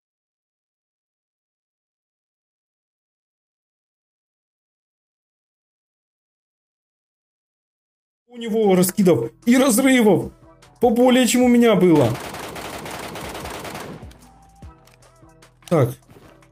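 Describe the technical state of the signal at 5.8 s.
At 5.8 s the signal is intact, with no fault present at that moment.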